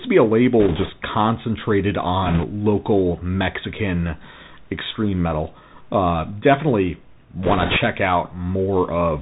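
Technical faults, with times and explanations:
Throughout: Bluetooth CVSD headset codec. The speech has been squeezed through the narrowband headset codec, which sends one bit per sample at 64 kHz, each bit only saying whether the waveform should step up or down, with the step size adapting as it goes. Nothing above 4 kHz survives, so the audio sounds boxed-in and telephone-like. Fast, loud high-frequency content outruns the step size and distorts, sibilants come out scratchy, and a granular hiss sits beneath the speech. The damage is plainly audible.
0.60–0.91 s, 2.26–2.45 s, 7.43–7.77 s: bit errors on a Bluetooth voice link. In each of these stretches, the first coming just after "to be a", a burst of flipped bits on the headset link lays a rushing, crackly noise over the speech. Because every CVSD bit carries the same small weight and the decoder's errors fade out quickly, there are no sharp clicks, only a brief roughening. 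The first burst, at roughly 3 percent errors, is milder than the later two at roughly 5 percent, which crackle more heavily.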